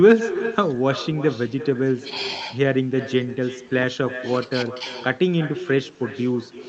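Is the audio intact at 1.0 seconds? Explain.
No. At 1.0 seconds the speech carries an echo with no canceller, present throughout the clip. The far end is replaying the call through a loudspeaker, and its microphone is sending that sound straight back without any echo cancellation. The returned copy trails the direct speech by roughly a third of a second, sitting about 14 dB below it. It sounds thinner, like a faint shadow of each phrase, on top of the band-limited character of the call codec.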